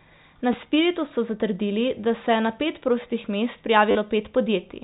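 At 0.53 s and 2.25 s, and again from 3.91 to 3.95 s, the speech shows packet loss with the last packet repeated. Each missing stretch (10 ms, then 40 ms at the end, fitting 10 ms packets) is filled by replaying the previous packet. The longer repeat gives a brief robotic buzz near 100 Hz rather than a silent gap. The G.711 telephone coding keeps everything below 4 kHz.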